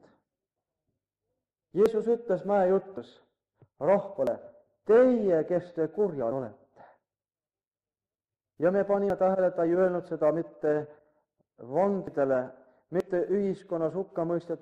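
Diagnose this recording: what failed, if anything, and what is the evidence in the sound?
Seven points where the sound jumps forward with no gap, at 1.86, 2.97, 4.27, 6.32, 9.10, 12.07 and 13.00 s. Most skip around 50 ms, the first two nearer 100 and 150 ms. It's likely a dropped buffer (overrun) at the driver/buffer stage, with samples overwritten before the software grabbed them.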